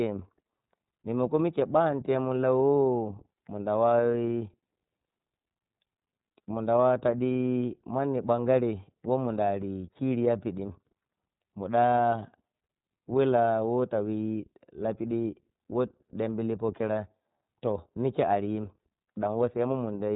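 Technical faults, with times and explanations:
Throughout, iLBC codec: the speech is confined to narrowband, with nothing above 4 kHz, and sounds plainly rough and slightly synthetic, which fits iLBC's 30 ms mode at about 13.33 kbps, where each frame's excitation is coded independently of the previous frame.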